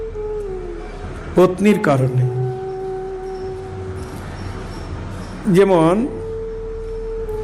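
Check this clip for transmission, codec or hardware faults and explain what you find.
No transmission, codec or hardware faults are audible anywhere in the recording.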